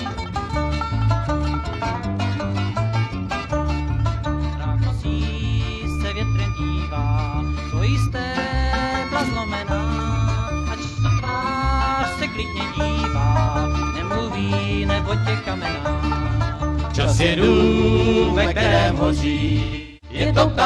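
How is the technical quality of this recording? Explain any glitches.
Two glitches, both AAC frame loss with concealment. From 10.85 to 11.47 s, about 300 ms of audio drops out in bursts, the longest around 150 ms. From 19.33 to 20.21 s, about 470 ms drops out, the longest run around 300 ms. The decoder fills the gaps from the last good spectrum, producing smeared, phasey patches. On a spectrogram they show as frozen, blurred bands.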